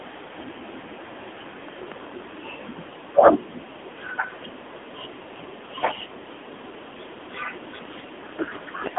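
Speech that sounds thin, boxed-in and buzzily synthetic throughout, with nothing above 3.8 kHz: AMR narrowband mobile codec damage, whose coarseness fits a low mode near 8 kbps.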